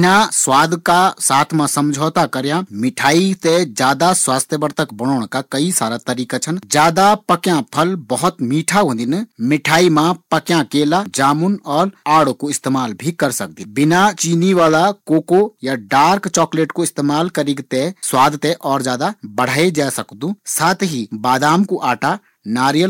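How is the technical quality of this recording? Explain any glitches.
The recording has hard clipping throughout the speech: overdriven by about 10 dB, a small fraction of peaks are sliced flat, adding a harsh crackle, unlike the smoother rounding of soft saturation.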